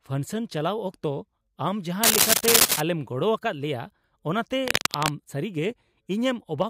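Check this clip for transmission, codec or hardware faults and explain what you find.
Two bursts of cable scratch noise occur in the speech, from 2.03 to 2.81 s and from 4.65 to 5.12 s. Dense, uneven scratching rides over the sound, first somewhat louder than the speech, then about level with it. This is likely a worn cable or connector being moved, its contact resistance flickering. Unlike isolated dropout clicks or steady hiss, it comes as irregular rustling clusters.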